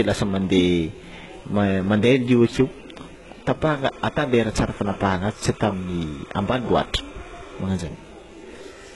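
HE-AAC compression, throughout: the treble is rebuilt from lower bands and stops at 11.4 kHz, so sibilants sound gritty and metallic, likely from HE-AAC at around 12 kbps. Timecode bleed, 3.66 to 7.59 s: a 30 frames-per-second timecode square wave leaks in well below the speech, flipping between tones near 1 and 2 kHz as a chirping warble.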